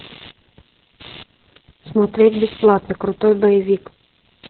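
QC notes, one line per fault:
Throughout: computer activity noise, a buzz pulsing at about 100 Hz, about 25 dB below the speech, as machine load shifts the audio ground.
Throughout: Opus voice compression, speech muffled, hoarse and robotic, with nothing above 4.3 kHz, which points to a very low bitrate, narrowband SILK setting.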